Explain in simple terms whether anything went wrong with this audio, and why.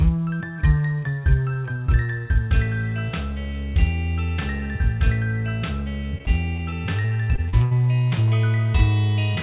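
Between 6.18 and 7.73 seconds the sound turns choppy and robotic. This is repeated packet loss. Small pieces of the audio stream arrived late or not at all, again and again. Each hole was patched by stretching the sound just before it, and those patches give the choppy, robotic quality. The gaps are short, the longest about 60 ms, but they come in quick succession. A single dropout would be one clean break. Here the breaks keep recurring through that stretch. The dull, phone-like tone of the whole clip, with nothing above 4 kHz, comes from the call line itself and is not part of this fault.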